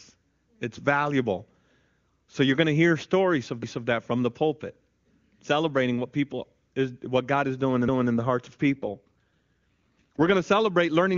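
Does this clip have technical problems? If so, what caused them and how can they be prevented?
Yes. There are overlapping chunks at 3.63 s, after "to hear stories of", and at 7.88 s, after "is doing in". A 250 ms piece replays every 4 s where each chunk starts early. Trim the overlap or crossfade properly at each chunk boundary.

There's also an AMR rate drop from 8.74 to 10.41 s, after "in the hearts of". The HD Voice codec falls from 23.85 to 8.85 kbit/s, so the speech turns rough and synthetic. Better radio coverage keeps the link at full rate.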